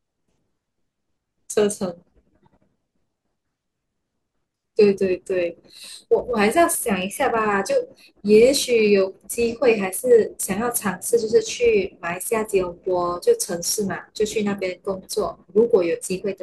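Throughout the speech, a block size mismatch (truncated) discards the tail of each block, leaving a steady 100 Hz buzz while pace and pitch stay essentially normal.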